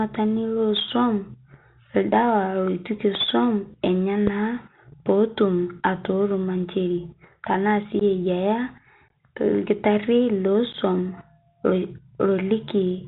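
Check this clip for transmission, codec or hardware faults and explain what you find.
Yes, there are faults: the whole clip passed through a Bluetooth CVSD headset codec, two loud pops sit early on, and three short bursts of unconcealed Bluetooth headset packet loss come later.

Bluetooth CVSD headset codec, throughout: the speech is confined to a narrow telephone band, and the damage is plainly audible. This codec sends a single up-or-down bit per sample and adapts its step size, which fits a 64 kbps link. Nothing passes above 4 kHz, so s sounds turn scratchy, loud bright moments distort where the step can't keep up, and a grainy hiss runs underneath. On a spectrogram, energy stops at a hard ceiling near 4 kHz, with a speckled noise floor below it.

Loud pops, at 3.15 to 3.17 s and 4.27 to 4.29 s: each is a single sharp crack, roughly 15 dB above the speech, and the speech carries on beneath it. 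The likely cause is a voltage step or spike from a plug, switch, static discharge or driver glitch, which the following circuitry shapes into a brief pulse. On the waveform each one shows as a tall, narrow spike. On the spectrogram it appears as a thin vertical stripe running up to the band's ceiling.

Unconcealed Bluetooth headset packet loss, at 8.00 to 8.02 s, 9.08 to 9.11 s and 10.73 to 10.75 s: at the first and third points, 15 ms of audio drops out. At 9.08 s, 22.5 ms is missing, scattered over 30 ms, and the longest gap is 18.8 ms. Short voice packets between the headset and the phone never arrived, and silence or an idle pattern was put in their place. The result is abrupt holes, and the speech resumes quieter for a moment as the adaptive step rebuilds. The waveform shows flat gaps with sharp edges, and the spectrogram shows blank vertical slots.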